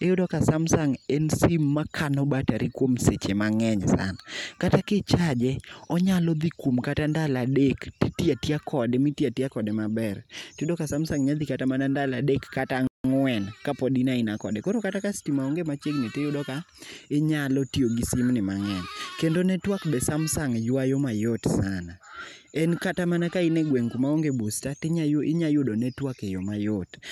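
A playback stall interrupts this speech recording at 12.87 s: the sound drops to silence mid-flow for about 0.17 s, then resumes at 13.04 s with "kapod in aina kode". The gap is a complete cut-out rather than a fade or a glitch, which is the signature of the player having nothing to send to the output. The likely cause is the player's buffer running dry or its thread being briefly blocked before it caught up and carried on.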